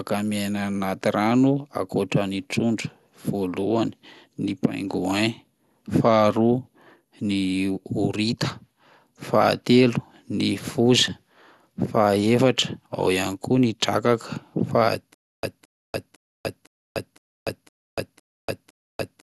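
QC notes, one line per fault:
Throughout: MP2 compression. Dull, gurgling, granular sound with nothing above 12.2 kHz. Starved sub-bands drop out, which fits a likely 80 kbps bitrate.
15.14–19.28 s: stutter with silent gaps. A 0.22 s burst repeats eight times, every 0.51 s, with 0.29 s silences, to the end. Likely a stalled stream replaying its last fragment.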